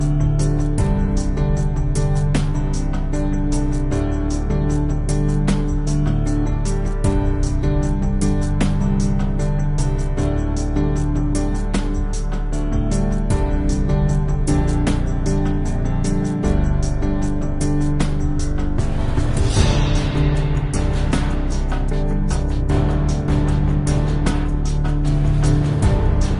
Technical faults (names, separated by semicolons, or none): wrong sample rate